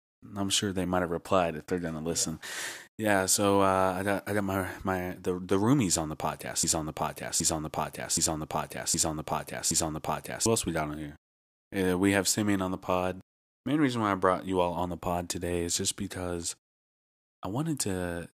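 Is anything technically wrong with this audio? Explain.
Yes. From 6.6 to 10.5 s, right after "roomies on the podcast", there is a broken-record loop. A 0.77 s fragment repeats exactly five times back to back before the audio resumes at "else we got on". The likely cause is a stalled player or stream resending its last buffered piece, so the audio that belonged in that span is missing.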